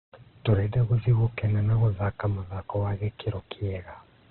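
Speech clip with heavy Opus compression damage throughout. Nothing above 4.2 kHz, and the sound is rough, grainy and noisy, likely from a CELT-mode encode near 12 kbps.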